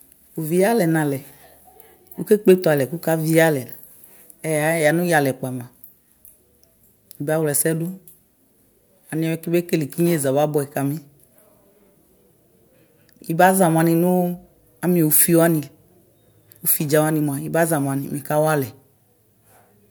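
No technical faults occur anywhere in the recording.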